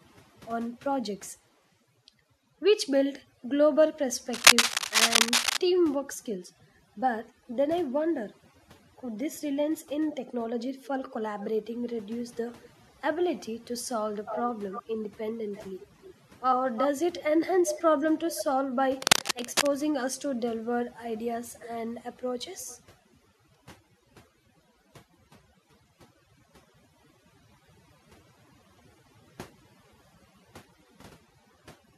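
Throughout the clip the background sinks to near silence with twinkling specks. This is overdone noise removal: a noise reduction stage set too aggressively pushes individual frequency bands down or out whenever they resemble its noise estimate, taking the softer parts of the speech with them and leaving isolated bands popping in and out.

From 4.33 to 5.57 s a dense, uneven scratching rides over the speech, somewhat louder than the speech itself, and it returns from 19.01 to 19.67 s at roughly the same level as the speech. This is cable scratch noise, likely from a worn cable, connector or control being moved so its contact resistance jumps about rapidly, injecting ragged bursts of noise.

A delayed copy of the speech trails behind it at several points. From 10.83 to 11.48 s it is faint and arrives 402 ms late. From 14.25 to 16.11 s, at 16.69 to 16.88 s and from 17.66 to 18.45 s it follows 338 ms behind, moderately strong in the first stretch and nearly as loud as the speech in the later two. 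At 22.5 to 22.8 s it returns, barely audible, with the same 338 ms delay. This is echo leak, likely from a far end playing the call on a loudspeaker whose echo canceller failed to remove everything its microphone picked up and sent it back down the line.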